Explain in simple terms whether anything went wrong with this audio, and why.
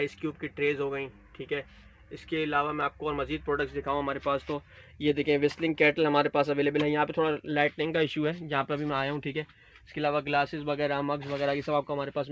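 Nothing went wrong here; the audio just came through an ordinary internet call connection, which is why the top end sounds a bit dull, with nothing above 8 kHz, exactly as you'd expect from a normal call.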